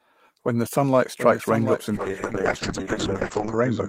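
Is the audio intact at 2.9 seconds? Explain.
No. At 2.9 s the clip sits inside a call bitrate drop that begins at 1.95 s, right after "sunlight strikes raindrops in", and lasts to the end of the clip at 3.88 s. The encoder's budget falls from 32 kbps to 7 kbps and stays near the bottom for about 1.6 s, so the codec quantises far more coarsely and narrows the audio band from 20 kHz to 8 kHz. At this moment the speech sounds rough, watery and muffled, with the upper treble gone.

A doubled audio track is also present here, as it is across the whole clip. A second full-band copy of the speech, about 10 dB quieter, trails the original by roughly 0.7 s. It has no decay or room colour, so it sounds like a clean repeat of earlier speech laid under the current speech rather than an echo. It most likely comes from a second, slower capture path or an edit that left two out-of-step copies in the mix.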